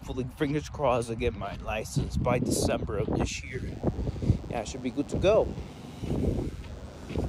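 A steady, thin buzz with a hard, reedy edge sits under the audio from 3.46 s to the end of the clip, around 30 dB below the main signal. It is DECT cordless phone buzz. A DECT handset or base nearby transmits a short radio burst every 10 ms, and the audio circuitry rectifies those bursts into a 100 Hz pulse train rich in harmonics.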